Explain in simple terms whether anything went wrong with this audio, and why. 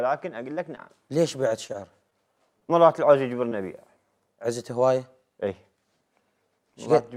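At 0.75 to 0.79 s and again at 3.49 to 3.53 s there is a tiny smear or wobble, where a sliver of sound may simply vanish. This is short concealed packet loss: about 20 ms of audio never arrived, and the receiver patched the hole by carrying the previous sound forward before rejoining the real signal.

From 1.41 to 2.14 s the sound turns choppy and robotic, with small pieces dropping out. This is repeated packet loss (robotic sound): four separate gaps, none longer than about 19 ms, each filled in by guessing from the sound just before, so the patches pile up.

Around 2.60 to 2.63 s one moment is held a touch too long, with a faint buzz or dip, but nothing is lost. This is a short stall from a late packet: the next chunk arrived about 19 ms late, so the receiver stretched the last sound until it came.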